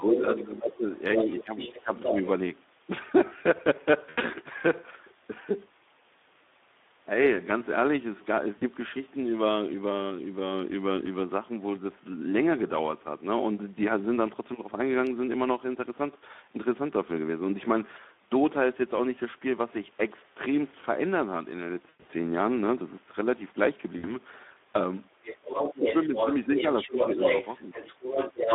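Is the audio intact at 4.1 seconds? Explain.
No. Between 4.09 and 4.22 s, packets went missing, about 80 ms' worth, and the decoder concealed the VoIP packet loss by extrapolating its last pitch and filter at falling gain. That gap turns into a fading buzzy tone or coloured noise. Underneath, the Speex codec, which fits roughly 11 kbps in a 250 Hz to 3.6 kHz band, leaves the speech plainly hoarse and noisy.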